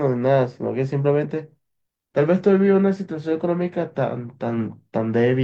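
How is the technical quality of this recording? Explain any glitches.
No glitches or dropouts are audible anywhere in the recording, so there is nothing to explain.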